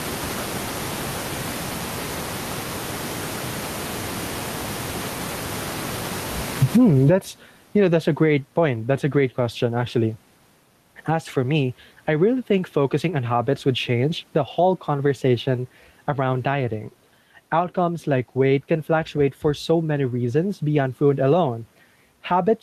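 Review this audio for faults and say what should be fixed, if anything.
Throughout the speech, the level is pulled down under each loud syllable, swinging around 35 dB. This is gain pumping, likely from input gain set far too high hitting a fast limiter. Lower the microphone gain so peaks sit well below the limiter threshold, and use a gentler, slower compressor if one is needed.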